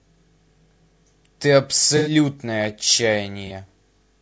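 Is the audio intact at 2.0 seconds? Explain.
No. From 1.97 to 2.11 s the sound breaks up in an AAC frame loss with concealment. About 90 ms of data never reached the decoder, which fits three consecutive lost frames. The decoder bridges the gap by reusing the last good spectrum with randomised or interpolated content, so the stretch comes out smeared, noisy or phasey rather than silent. The gap is too short for the concealment to fade fully out.

The segment also carries plainly audible damage from low-delay AAC compression, most likely AAC-ELD at 32 kbps. The short analysis frames resolve the harmonic structure of the speech poorly, and the low bitrate leaves too few bits to code it cleanly. The result is a rough, grainy texture, with noise filling the spaces between harmonics and a thin, synthetic-sounding top band.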